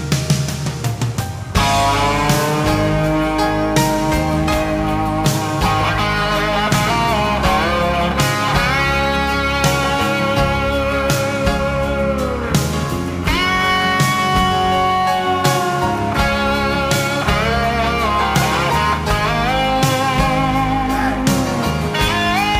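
From 11.19 to 12.44 s, one channel runs late by about a single sample, roughly 0.02 ms, before the two are summed to mono, causing channel delay (comb filtering). The first cancellation notch sits near 20 kHz, so the audio turns slightly dull, losing its top-end air.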